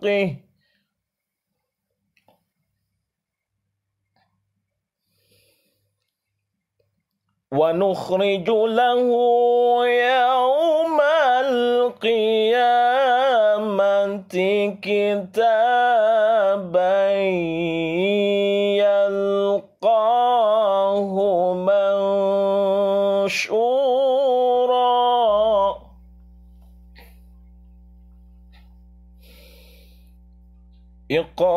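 From 25.26 s to the end at 31.57 s, a steady low 60 Hz tone sits under the sound, roughly 30 dB below it. This is mains hum: the power line leaks into the signal through a ground loop or a nearby transformer.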